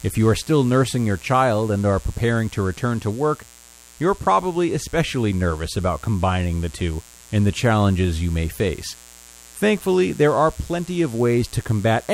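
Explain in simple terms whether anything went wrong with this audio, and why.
Mains buzz runs through the whole clip: electrical interference from the 60 Hz power supply leaked into the recording, leaving a steady, raspy buzz under the speech.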